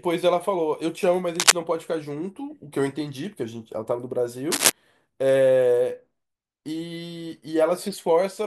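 A worn cable, connector or control in the chain was likely disturbed twice during this speech clip, its contact resistance jumping about erratically and injecting cable scratch noise. The result is two brief bursts of dense, uneven scratching and rustling, from 1.35 to 1.53 s and from 4.51 to 4.72 s, each lasting roughly a fifth of a second and sitting a few decibels louder than the speech itself, so they briefly dominate it.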